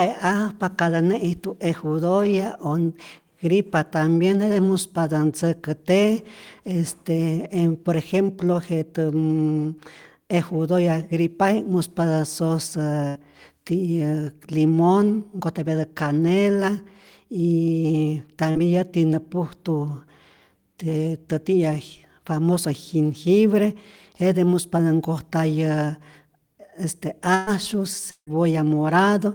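At 13.07 to 13.18 s a burst of packet loss occurs: a run of packets failed to arrive in time, so about 80 ms of speech is gone. The receiver extended the last sound for roughly 78 ms, letting it die away, which is heard as a short held buzz or fading hiss before the speech picks up further along with that stretch missing.

At 18.51 to 18.58 s comes a short concealed packet loss. Around 40 ms never reached the decoder, and the receiver patched the hole by continuing the preceding sound for about 38 ms before blending back into the real signal. It comes across as a brief smear or wobble, and a small piece of the speech can drop out.

A second burst of packet loss runs from 27.35 to 27.50 s and is longer: about 120 ms went missing and roughly 117 ms was filled with the decaying continuation. There is no silent stretch, so it sounds like a longer buzzy or hissy smear, after which the speech jumps ahead.

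From 28.11 to 28.30 s the sound is carried forward as a fading buzz or hiss for about 159 ms, the last 70 ms or so of it fading to silence, before the speech returns, around 160 ms further on. This pattern is likely a long network dropout, in which no audio arrived for the whole stretch and the concealment ran out.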